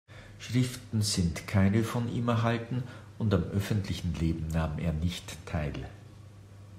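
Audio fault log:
No audible faults found.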